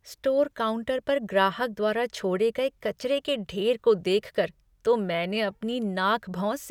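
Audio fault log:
Nothing to log here; this speech clip gave me no trouble at all.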